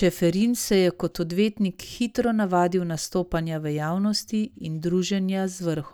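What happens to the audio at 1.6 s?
Nothing goes wrong at 1.6 s; the speech carries on intact through that moment, with no dropout, click or distortion to be heard.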